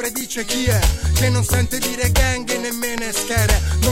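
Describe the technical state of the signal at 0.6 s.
At 0.6 s the signal is intact, with no dropout, clipping, glitch or other fault to be heard at that point.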